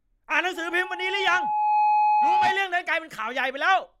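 A steady tone near 845 Hz rises out of the speech at 0.55 s, swelling over roughly a second and a half into a piercing squeal that ends up a few decibels louder than the talker before it stops at 2.71 s. This is loudspeaker feedback squeal: the microphone is hearing the loudspeaker it drives, and at 845 Hz the round trip adds more gain than it loses, so that one frequency keeps building on itself until the loop is broken.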